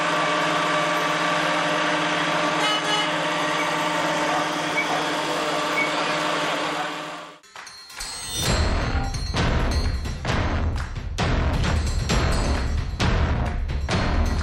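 No technical faults can be heard anywhere in the audio.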